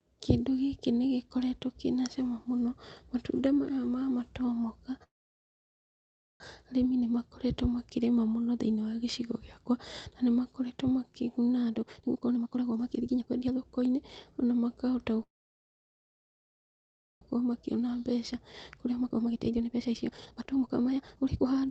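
Speech over a call path whose codec limits the audio at 8 kHz, with two call audio freezes and two stretches of jitter buffer speed-up. After "matunda maya ma matomoka", the sound stops from 5.03 to 6.42 s and resumes at "arĩmi nĩnmakoretwo makĩrĩma mũno". A second freeze runs from 15.23 to 17.23 s. Both are likely stalled packets emptying the buffer, leaving a brief fading tail and then near-silent gaps of 1.33 s and 1.95 s. On the waveform these are flat lines, and on the spectrogram they are blank columns. No speech is lost; it simply arrives later. The buffer then sheds the backlog. From 11.62 to 14.53 s, after "gĩakwa na nĩmakoretwo makĩguna", speech plays at 147% speed, and from 17.41 to 21.65 s it plays at 144%, cutting roughly 1.5 s and 2 s respectively. Pitch stays the same but the delivery sounds hurried. On the spectrogram, harmonic bands keep their spacing while syllables crowd closer together, and the waveform shows compressed, tightly packed bursts.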